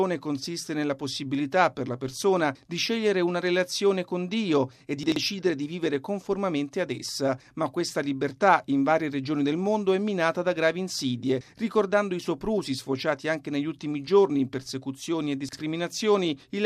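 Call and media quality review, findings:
Chunks out of order at 5.04–5.16 s and 15.49–15.57 s: a roughly 43 ms block played two chunks late, then one late, giving jumbled moments.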